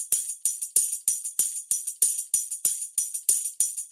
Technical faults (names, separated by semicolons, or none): none